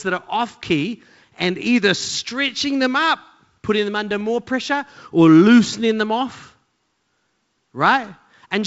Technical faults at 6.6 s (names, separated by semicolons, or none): none